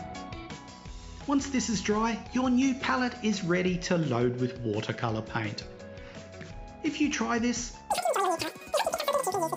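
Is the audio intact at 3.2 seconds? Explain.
Yes, the audio at 3.2 seconds is intact, with no dropout, click, distortion or other fault at that moment.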